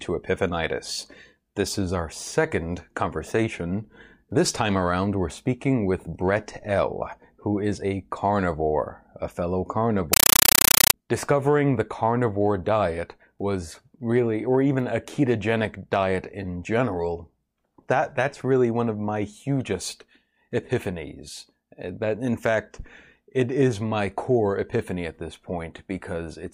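From 10.13 s to 10.94 s, right after "a carnivore a fellow", the speech gives way to a compressed stream played as audio. An AC-3 bitstream reached the output undecoded and was treated as ordinary PCM samples. Each coded frame becomes an 8 ms blast of noise followed by silence, repeating 31.25 times a second. The result is a harsh, very loud chattering static lasting about 0.8 s.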